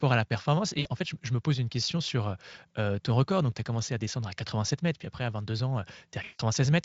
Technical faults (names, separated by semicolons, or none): VoIP packet loss concealed by the speech codec